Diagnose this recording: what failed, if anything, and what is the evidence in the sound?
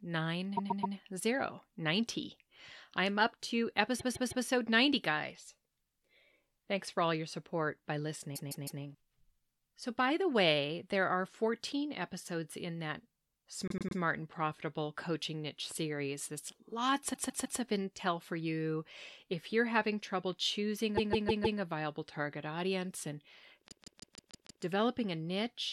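Repeated frames at the codec or storage stage: stutters at 0.56, 3.99, 8.35, 13.68 s (before "and profitable coaching niche"), 17.13 s (before "of intel for you"), 20.97 and 23.68 s (after "viable target audience and"). Each 105–157 ms block replays three to six extra times, showing as identical side-by-side tiles on waveform and spectrogram.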